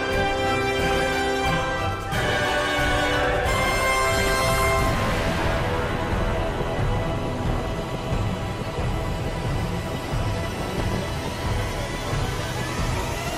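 DAB burbling hits four times, at 0.80 to 1.02 s, 4.17 to 4.93 s, 7.37 to 8.34 s and 10.41 to 11.04 s. Bit errors slip past error correction, corrupting sub-band levels frame by frame. You get bubbly, chirpy squelching, worst around 4.2 s.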